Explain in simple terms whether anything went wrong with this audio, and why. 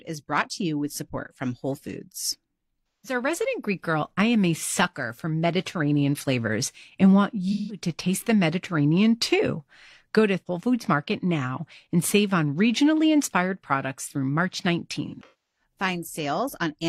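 Pieces of the compressed AAC stream went missing three times, so the player had to guess, causing AAC frame loss with concealment. At 2.90 to 3.15 s and 7.52 to 7.80 s (after "flavors and want", before "taste the"), about 0.17 s of speech was rebuilt from the last good sound, heard as a brief smeared, noisy patch. From 15.07 to 15.63 s the gaps are longer, the longest about a third of a second, so the sound fades toward silence and then returns.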